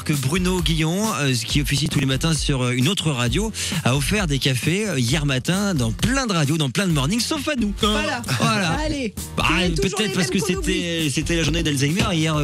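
A gritty burst of crackle tears across the sound from 1.70 to 2.03 s, and a shorter one returns from 11.44 to 11.65 s. Both are processor overload crackle. The processor fell behind and missed a run of buffer deadlines, around ten in the first burst and about half that in the second. Each missed block was skipped outright, leaving tiny hard-edged gaps a few milliseconds long, which fits buffers of roughly 5 ms.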